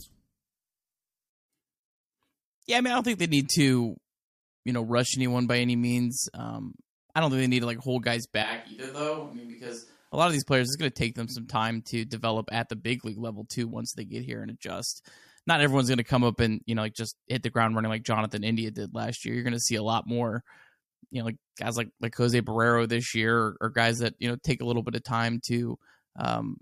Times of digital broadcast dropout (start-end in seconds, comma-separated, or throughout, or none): none